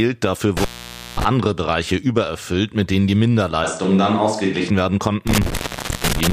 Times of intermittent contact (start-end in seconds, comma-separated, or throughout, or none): 0.57-1.25, 5.27-6.33